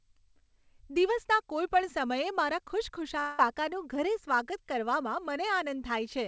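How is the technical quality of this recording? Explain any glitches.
The recording has one clear glitch, heard over a call path whose sound stops at 8 kHz, consistent with G.722 wideband coding. From 3.20 to 3.55 s, right after "દિવસના કોઈપણ સમયે મારા", the speech turns into a fading buzz for about 0.19 s and then resumes with roughly 0.18 s missing. This is likely a long network dropout: packets stopped arriving, the receiver stretched the last sound to cover the gap, and the lost part was never played.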